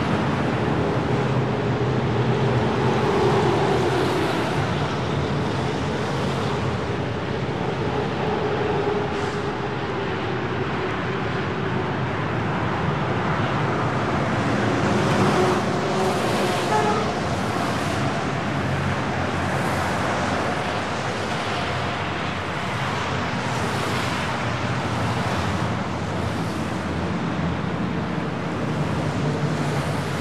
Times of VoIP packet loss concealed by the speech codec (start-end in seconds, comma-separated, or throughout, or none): none